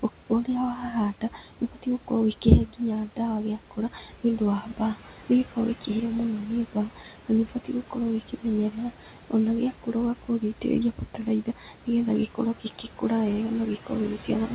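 A noise suppressor on a speech call is pulling down whatever it judges to be steady background by about 12 dB, frame by frame, so the room noise dips between phrases and swells back under them, all above a call-codec band that stops near 4 kHz. In seven places the same suppressor mistakes parts of the speech for noise and turns them down by about 12 to 13 dB, so soft sounds and word endings seem swallowed: 0.00–0.48 s, 1.21–3.18 s, 3.58–5.89 s (just before "mũno nĩ"), 6.69–9.33 s (just after it), 9.72–10.64 s, 10.96–11.88 s and 12.29–13.03 s. The longest stretches each lose around a second of speech in total.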